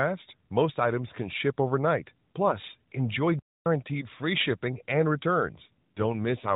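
At 5.66 s an AMR rate drop sets in and lasts to the end, at 6.56 s. The narrowband mobile codec, lightly coloured before this, cuts its rate, which fits a fall from 12.2 to 5.9 kbps. The band stays the same and there is no gap. The speech turns rougher, buzzier and more synthetic.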